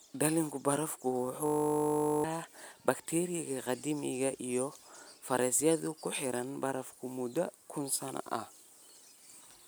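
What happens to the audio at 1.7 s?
At 1.7 s the speech is caught in a system hang loop. It runs from 1.46 to 2.24 s. The computer or its audio driver stalled, but the sound hardware kept replaying the same 20 ms slice of its ring buffer. That slice repeats exactly, at 50 times per second. Because the loop is so short, it is heard as a steady, flat buzz at 50 Hz. Roughly 0.7 s of the real speech is lost beneath it.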